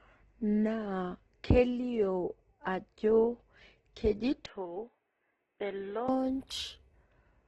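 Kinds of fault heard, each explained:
Opus compression: The speech throughout sounds grainy and rough rather than swirly, with nothing above 12 kHz. This points to heavy damage from likely Opus coding in its music mode at a low rate, in keeping with about 12 kbps. Unlike MP3, whose emptied bands give a watery, warbling swirl, this codec fills thin bands by folding lower ones or adding noise, so detail turns hissy and coarse instead of hollow.
Input switched to a poorer device: From 4.46 s to 6.09 s the speech abruptly turns dull and boxy, with nothing above 3.6 kHz, and drops about 10 dB in level, with no gap at either change. A faint new background noise sits well below the speech. This likely means the recording briefly jumped to a lesser microphone or a headset call profile and then back. A pure filter or codec change would alter only the tone, whereas here the level and noise floor change along with it.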